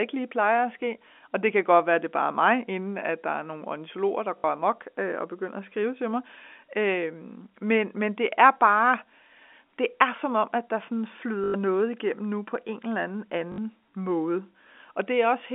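At 4.38 s after "er nogle ornitologer der", at 11.44 s after "om at der sådan", and at 13.52 s after "på en eller anden", packet loss with the last packet repeated fills 60, 100 and 60 ms with a looped fragment. The repeats buzz at 50 Hz, which fits 20 ms packets. Unlike a silent dropout, the gap sounds like a robotic stutter.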